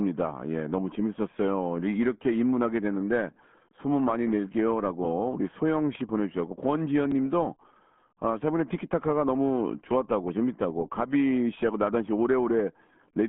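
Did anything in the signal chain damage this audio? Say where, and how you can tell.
Yes. RealAudio 14.4 codec damage runs through the whole speech clip at the codec stage. Nothing survives above 3.8 kHz, the band sits at roughly 150 Hz to 3.4 kHz, and heavy gargly, muffled smearing points to a starved rate of around 8 kbit/s.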